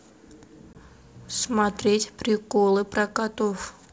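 At 0.73 s a couple of packets drop out of the ADPCM stream and the gap is filled with silence, so the speech stops dead at a hard edge until 0.79 s. The lost data also leaves the receiver's adaptive predictor and step size out of step with the sender's, so when the speech comes back it has a short burst of slight distortion that settles within some tens of milliseconds. This is packet loss on an ADPCM call, carried over G.722 wideband coding whose upper band stays clear.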